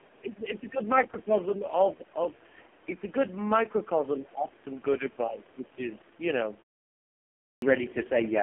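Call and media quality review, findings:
Buzzy, synthetic, band-limited sound throughout, nothing above 3.4 kHz and thin low end, passband roughly 200 Hz to 3.4 kHz. AMR narrowband mobile codec at its lowest mode, 4.75 kbps: sparse pulse excitation through a vocal-tract model, heavy coding damage.

Brief faint second voice, 1.31–1.35 s, about 20 dB below the talker. Other side's voice leaking through, likely residual echo: far-end loudspeaker signal picked up by the microphone and not fully cancelled by the echo canceller.

Talker level dips about 10 dB, 4.19–4.6 s, around a third of a second affected in total. Speech suppressed in double talk, likely the echo canceller attenuating near-end speech while the far end was also active.

Onset abruptly chopped at 7.51 s, first 0.11 s missing up to 7.62 s, after a pause of about 1 s. Clipped start after a pause: output path asleep during silence, slow to wake, leading sound swallowed.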